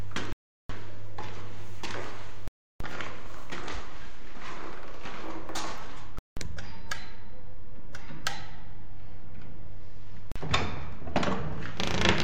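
The sound drops to silence at 0.33, 2.48, 6.19 and 10.32 s. The gaps last about 0.37, 0.33, 0.18 and 0.04 s. This is likely a Bluetooth stall: delayed packets emptied the headphones' buffer until resends arrived.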